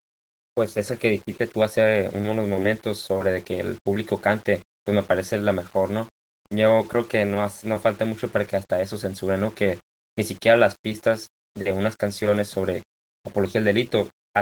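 Throughout the speech a gritty, grainy distortion rides on every sound, roughening quiet syllables and sputtering in the softest gaps. This is likely low bit depth without dither, consistent with rounding to about 7 bits, leaving error roughly 30 dB below the signal. On a waveform the quietest stretches show visible staircase steps, and a spectrogram shows broadband hash that rises and falls with the speech.

Opus voice compression is also present for the whole clip. The speech sounds hoarse, smeared and faintly robotic, with plainly audible codec damage that fits a hybrid-mode stream around 16 kbps in 20 ms frames. A spectrogram shows blotchy, coarsely quantised upper bands and energy ending near 20.1 kHz.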